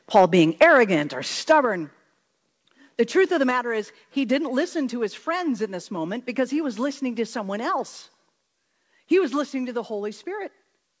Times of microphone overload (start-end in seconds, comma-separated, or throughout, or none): 0.16-0.25, 0.61-0.80, 1.51-1.59